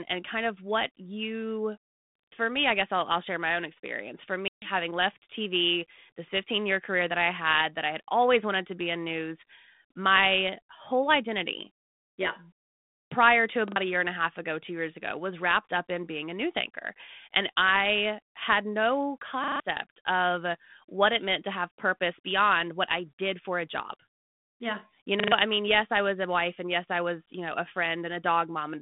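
Speech over a band-limited telephone line that cuts off above about 3.6 kHz, with the light coding grain of G.726 ADPCM (it points to the 32 kbit/s DECT rate), carries two kinds of fault. A repeated buffer occurs four times. New audio failed to arrive in time, so the device replayed its last block, which fits a 40 ms buffer. At 2.16 to 2.32 s and 19.44 to 19.6 s (between "I had no" and "of what it meant") one short piece sounds four extra times. At 13.68 to 13.76 s (between "prior to" and "a year and") it repeats twice, and at 25.2 to 25.32 s (just before "I mean yes I") three times. Each repeat gives a hard-joined stutter and loses roughly 70 to 150 ms of real audio. There is also packet loss on an ADPCM call at 4.48 to 4.70 s. About 140 ms went missing, perhaps seven packets' worth, and was filled with hard-edged silence. The decoder's prediction and step size then drifted from the sender's, so the speech returns disturbed before settling.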